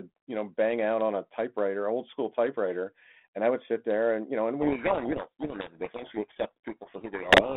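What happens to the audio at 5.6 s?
At 5.6 s you're in the middle of a codec payload misread, which starts at 4.62 s, right after "and you know and", and runs to the end of the clip. The two ends disagree on the bit order inside each G.726 code word, so the decoder takes perfectly valid-looking codes and steps its adaptive prediction the wrong way. The speech gets buried under harsh, grinding distortion, well beyond the light coding damage of the 32 kbit/s narrowband line before it.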